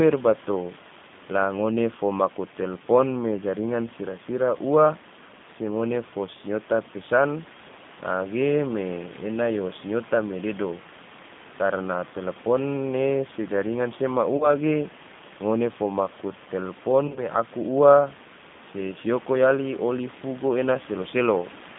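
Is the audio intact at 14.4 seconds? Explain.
No. From 14.37 to 14.51 s, between "ne se jaringan sea" and "ge ngone fo maku", the speech smears into a buzzy tone or a coloured noise that fades. This is VoIP packet loss concealed by the speech codec: the decoder stretched its last pitch and filter across a gap, which points to roughly 30 ms of lost audio, and the voice stays weak until the frames rebuild. Over the same moment, the G.729 codec's 8 kbit/s pulse-based reconstruction gives the speech a rough, synthetic edge and confines it to about 150 Hz to 3.6 kHz.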